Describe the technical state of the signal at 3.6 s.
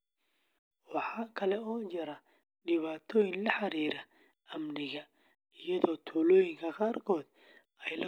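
At 3.6 s the speech signal is intact, with no fault present at that moment.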